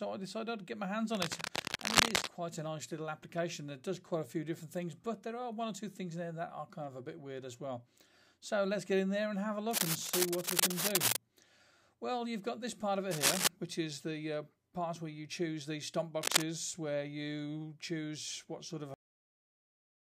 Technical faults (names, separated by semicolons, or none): cable scratch noise; cut-off end